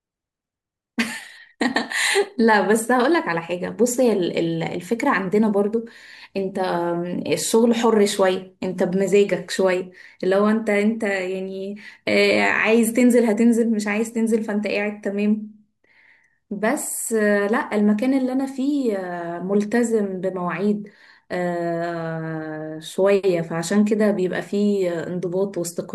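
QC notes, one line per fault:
No faults found in the speech recording. Nothing needs logging for it.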